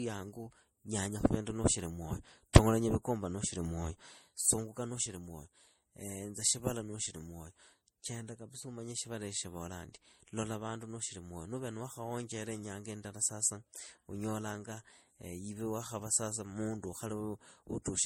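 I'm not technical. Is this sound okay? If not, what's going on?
No. All through the speech, nothing above 16.5 kHz comes through and two codecs' artefacts overlap, likely from transcoding between lossy codecs, squeezed by one compressor, then another.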